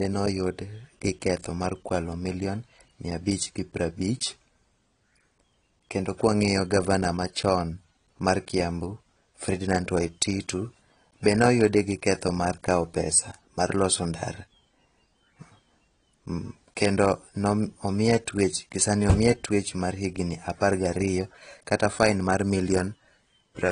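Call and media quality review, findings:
Likely AAC-LC encode at low bitrate, consistent with about 32 kbps; quantiser starving the spectrum. Throughout: speech band dulled, lowered high-frequency cut-off, smeared consonants, warbly fizz on sibilants and sustained vowels. Plainly audible AAC compression damage.

Dropped samples, 11.69 s, just before "gi ketho": a couple of samples likely lost in the capture or transport buffer, so the waveform jumps discontinuously. Heard as one sharp click; no audible gap, only a thin broadband spike.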